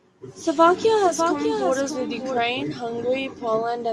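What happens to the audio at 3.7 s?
Nothing goes wrong at 3.7 s: the speech continues intact there, with no dropout, click, distortion or other fault.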